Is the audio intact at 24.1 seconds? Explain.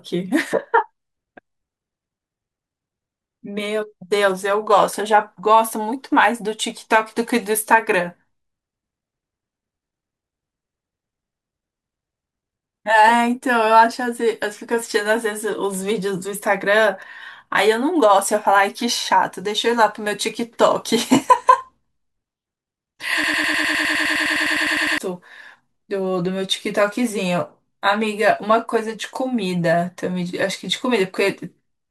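No. From 23.24 to 24.98 s a broken-record loop replays one 102 ms fragment 17 times back to back, likely from a stalled player resending its last buffer. The waveform shows identical tiled blocks; the spectrogram shows stripes repeating every 0.1 s.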